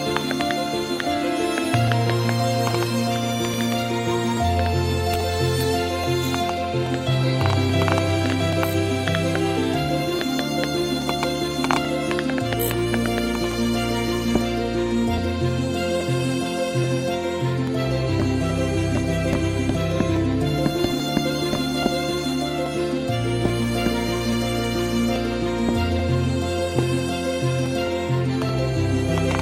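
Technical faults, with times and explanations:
0.21–29.32 s, clock drift buffer slips: Two devices are likely running on separate clocks that disagree by roughly 700 parts per million, so the buffer between them steadily drifts until a short block of samples, on the order of 30, is dropped or repeated to catch up. Each slip breaks the waveform abruptly, giving a click or pop that recurs every 0.83 s, around forty times across the span while sound is present.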